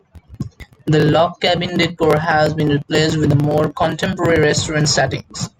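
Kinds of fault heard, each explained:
Loud pop: one sharp pop at 1.84 to 1.86 s, well above the speech, likely a voltage spike; the speech carries on underneath.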